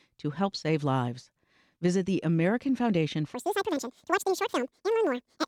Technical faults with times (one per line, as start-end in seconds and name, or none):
3.34-5.48 section at the wrong speed